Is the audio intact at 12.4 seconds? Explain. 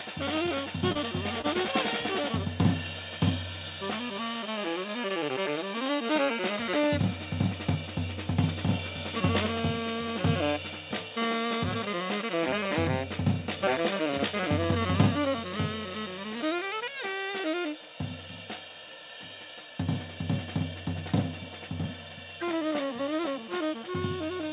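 Yes, the audio at 12.4 seconds is intact, with nothing heard there beyond the narrowband character of the call path, whose content stops at about 4 kHz.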